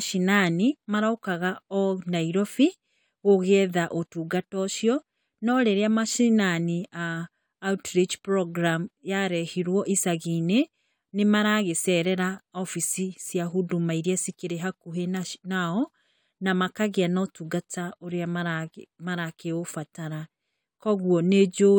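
No technical faults can be heard anywhere in the recording; the speech signal stays intact and continuous throughout.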